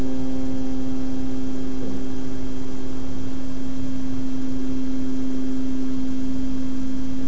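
No technical faults are audible.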